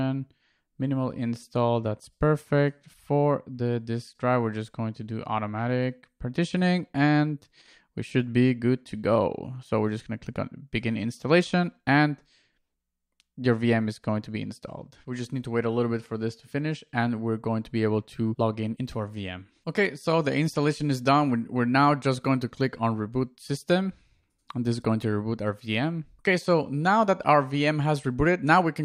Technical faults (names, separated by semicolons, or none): none